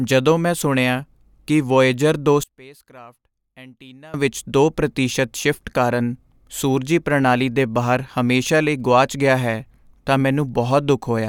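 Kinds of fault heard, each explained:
One channel inverted: from 2.44 to 4.14 s the speech falls away by about 25 dB, likely because one side flipped polarity and cancelled in the mono sum.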